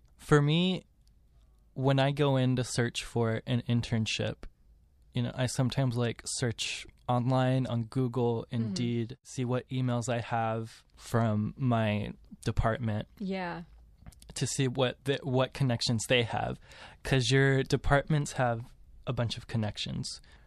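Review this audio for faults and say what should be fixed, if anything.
Nothing to fix: no faults turn up anywhere in the speech, so no action is needed.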